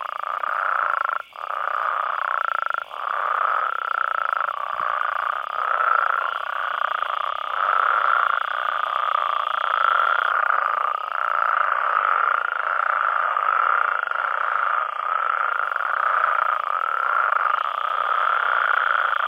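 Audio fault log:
Throughout: unreliable data bit. There's a steady crackly fizz under everything, and it keeps going right through the quiet bits, which gives it away. It sounds like one data line is flaky, so a random share of samples come out with that bit flipped. Each flip adds a spike of the same size, and the scatter of identical spikes blurs into a constant crackle that doesn't follow the level of the sound at all.
11.52 to 15.52 s: adaptive stream at a lower bitrate. At 11.52 s the quality drops all at once with no gap: the top end goes dull, with nothing above 12.3 kHz, and codec artefacts come up. The stream seems to have switched to a much cheaper version for about four seconds because the connection slowed. The sound fits a jump from roughly 96 kbit/s AAC down to a 16 kbit/s HE-AAC-style stream, then back up at 15.52 s.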